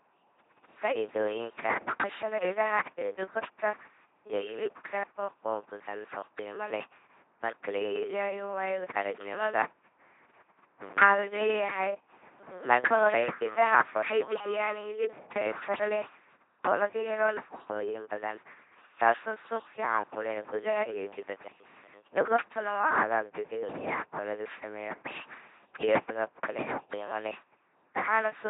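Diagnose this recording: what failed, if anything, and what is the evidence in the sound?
The codec stage failed. An LPC-10 vocoder has done heavy damage across the whole clip. The speech buzzes like a machine, and nothing sounds above 3.8 kHz. Each instant becomes a pulse train or noise driving a small filter, which fits a 2.4 kbit/s vocoder.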